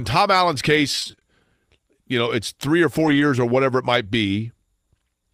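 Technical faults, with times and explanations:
0.91–1.23 s, repeated packet loss (robotic sound): eight short holes of 20 ms each, 160 ms in total, were patched by stretching the preceding sound, so half this span is concealed. It sounds choppy. A spectrogram shows repeated, smeared frames with blurred harmonics.
2.99–3.21 s, lost packet rebuilt from error correction: between "know it's three or" and "or whatever it might", about 120 ms was rebuilt from low-bitrate copies, which fits six 20 ms frames. There is no gap, but the sound turns rougher and noisier. The waveform stays continuous, while the spectrogram looks grainier and hazier there.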